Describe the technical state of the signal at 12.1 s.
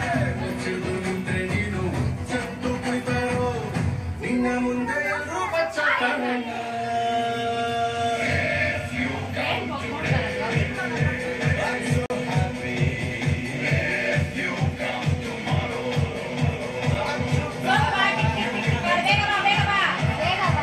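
At 12.1 s the audio is emerging from a block of digital silence spanning 12.06 to 12.1 s. A 40 ms run of samples was zeroed, likely from an unfilled output buffer, giving a short hole. The waveform shows a flat, near-silent stretch, and the spectrogram shows a blank column.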